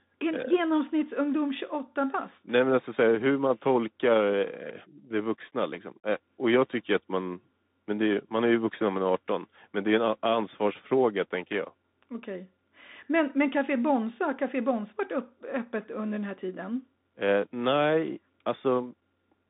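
From start to finish, the speech passes through a Bluetooth CVSD headset codec. The band runs from about 150 Hz to 3.7 kHz, and nothing is heard above 3.8 kHz. The result is thin and boxy. CVSD sends one bit per sample, saying only up or down, and adapts its step size. The damage is plainly audible. Fast, loud high content outruns the step and distorts, s sounds turn scratchy, and a granular hiss sits underneath. This fits a 64 kbps stream.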